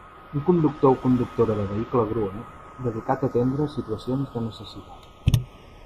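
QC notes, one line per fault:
throughout, channels drifting apart: slow flanging sweep when summed to mono; separate clocks roughly 70 ppm apart slide the inter-channel delay to about 0.4 ms.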